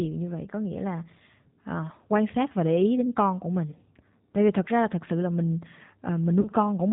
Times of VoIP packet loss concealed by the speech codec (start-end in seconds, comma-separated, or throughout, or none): 6.41-6.50